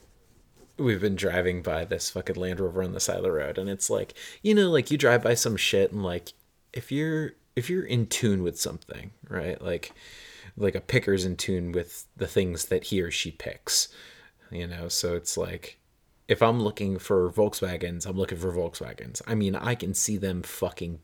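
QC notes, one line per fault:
No faults heard anywhere in the speech.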